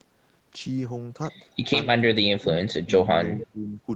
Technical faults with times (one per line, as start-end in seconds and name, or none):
2.33-2.50 speech suppressed in double talk
2.85-2.92 speech suppressed in double talk
3.40-3.80 speech suppressed in double talk
3.42-3.47 echo leak